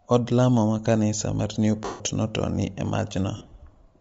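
Throughout, the speech carries a breathy, grainy edge with a noisy, thinned-out top end. This is likely Bluetooth LC3 compression: the codec discards much of the upper spectrum and fills it with noise, and the damage is plainly audible. The sound fits a 32 kbps stream with 10 ms frames.

From 1.85 to 2.00 s, right after "lamo ma kanisa mar", lost LE Audio frames leave a 150 ms gap. The decoder repeats the last spectrum with scrambled signs, producing a noisy smear that fades toward silence. From 3.37 to 3.51 s, about 80 ms of frames are lost across roughly 140 ms. The longest run is around 40 ms, so the result is shorter, broken bursts of the same smear.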